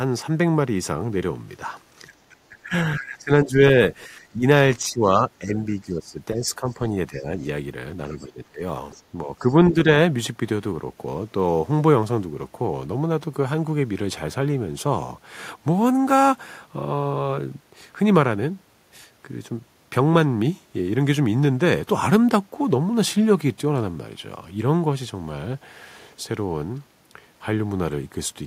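From 2.07 to 7.29 s the talker's speech is suppressed in double talk. It dips in patches, about 2 seconds in all, falling by roughly 15 dB at worst. The likely cause is an echo canceller turning down both sides while they overlap. At 6.70 to 6.74 s the other side's voice leaks through, a faint scrap far below the speech. The likely cause is loudspeaker echo the canceller failed to remove. From 8.14 to 8.62 s the suppression returns, deeper, near 20 dB. A brief leak sits at 8.16 to 8.27 s. Another, slightly louder, runs 8.91 to 9.51 s. Suppression again clips the speech from 9.26 to 9.87 s, by about 10 dB.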